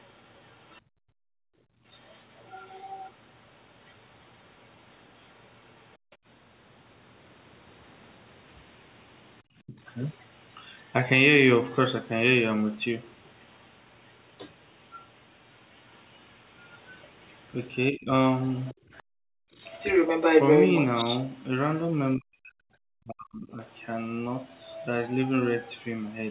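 From the start to 6.16 s a second, faint voice sits well below the talker, most likely the other side's voice leaking through from a loudspeaker that the echo canceller did not fully remove. Background gating by the echo canceller cuts the room sound by about 38 dB from 0.82 to 1.85 s and by about 39 dB from 5.98 to 6.2 s. The background falls away and returns, but the talker's voice is not involved. At 9.48 to 9.74 s the talker's own voice briefly dips by roughly 35 dB, which is likely speech suppressed in double talk. From 11.7 to 25.86 s the leaking voice returns at about the talker's level. Likely against it the talker drops by roughly 20 dB between 17.91 and 18.77 s and cuts out almost completely from 22.16 to 23.6 s. The room sound is gated again by about 40 dB from 19.05 to 19.54 s. Gating removes only the background. Double-talk suppression bites into the talker while both voices overlap.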